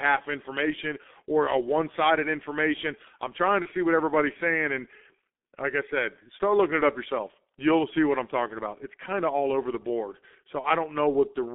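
The whole clip runs through a G.723.1 codec, and it's doing heavy damage. The band sits between about 200 Hz and 3.5 kHz, so the speech is muffled and boxy, and the low-rate voice model only updates every 30 ms frame, which leaves it hoarse with smeared consonants. That texture fits the 6.3 kbit/s mode.

At 3.62 to 3.67 s, right after "sided information I'm trying" and before "see what everybody's saying", there's VoIP packet loss concealed by the speech codec. The gap sounds like a single lost 30 ms frame. The decoder fills it by extending its last pitch and filter at falling gain, giving a short buzzy or noisy smear that sags before the voice firms up again. The same thing happens at 10.61 to 10.68 s, just after "all over the board". There's another brief fill, and the sound stays weak or distorted for a moment as the decoder's state catches up.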